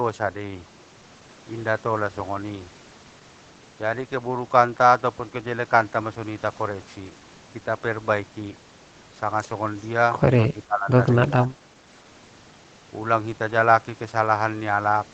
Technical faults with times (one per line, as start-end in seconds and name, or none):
10.53-10.92 speech suppressed in double talk
11.30-11.57 speech suppressed in double talk